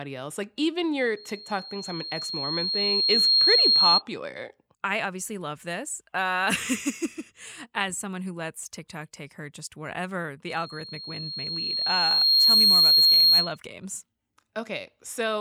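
Loudspeaker feedback squeal appears from 1.16 to 4.02 s and again from 10.48 to 13.57 s. The microphone hears its own loudspeaker, and the loop runs away at 4.2 kHz. Each time, a thin tone swells over about two seconds. It peaks well above the speech, and louder the second time.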